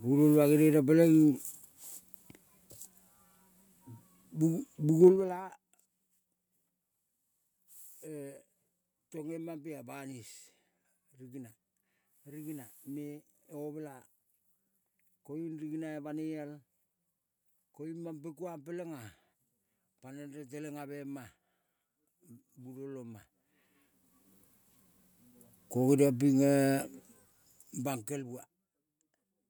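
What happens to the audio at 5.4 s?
At 5.4 s the speech is near the end of a burst of zipper noise running from 5.04 to 5.44 s. The level drops by roughly 20 dB in unsmoothed 2 dB steps, about 30 a second, each step clicking. The waveform envelope shows a staircase, and the spectrogram shows faint vertical broadband ticks.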